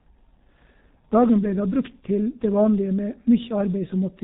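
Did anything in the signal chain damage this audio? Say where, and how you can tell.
Yes, at the codec stage: G.723.1 coding runs throughout. Nothing survives above 3.8 kHz, and the speech is muffled and hoarse with smeared consonants, which fits a stream of about 6 kbit/s. Its slow 30 ms model updates cause the hoarseness, which a simple telephone-band filter would not.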